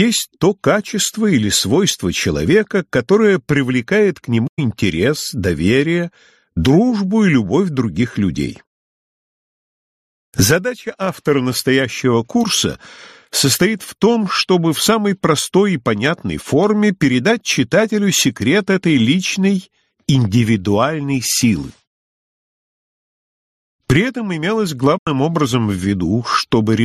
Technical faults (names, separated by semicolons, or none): corrupt frame concealed